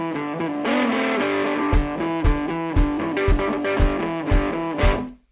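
Nothing is technically wrong with the audio, which has come through a call path whose codec leaves nothing above 4 kHz.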